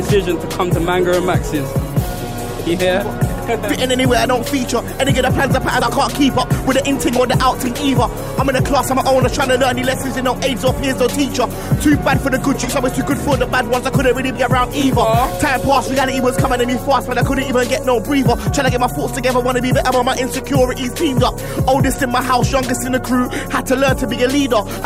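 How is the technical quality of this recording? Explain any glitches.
The recording has three short dropouts. Compressed frames were skipped at 5.81 s, from 12.63 to 12.68 s, and from 14.35 to 14.39 s. Whole 20 ms frames never reached playback: about two at first, then roughly three each time. The audio jumps ahead.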